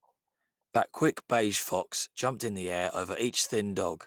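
Nothing in this speech recording stood out on careful listening.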